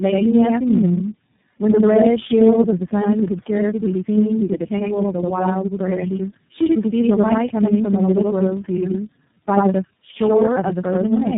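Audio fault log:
Throughout: channel delay (doubling), one channel arrives about 85 ms late, consistent with a 4096-sample buffer, so the mono sum carries an equal-level slap echo.
Throughout: tandem speech coding, the speech passed through four successive speech coders, ending at iLBC, each re-coding degraded output, leaving rough, muffled, warbly speech band-limited near 3.7 kHz.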